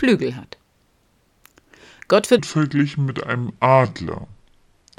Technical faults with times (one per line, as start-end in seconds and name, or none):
2.39-4.98 section at the wrong speed